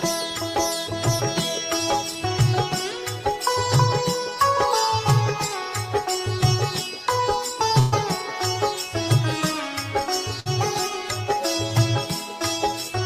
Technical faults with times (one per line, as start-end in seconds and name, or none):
7.79-7.94 burst of packet loss
10.40-10.47 burst of packet loss